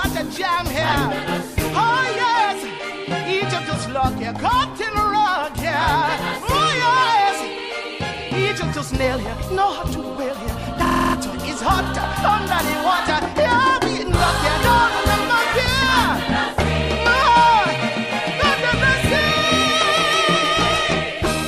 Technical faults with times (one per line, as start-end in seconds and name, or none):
10.87-11.15 system hang loop